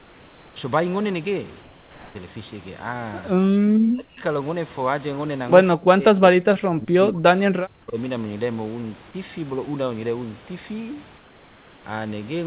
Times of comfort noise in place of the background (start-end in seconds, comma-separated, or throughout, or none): 0.00-0.56, 1.61-2.15, 11.18-11.84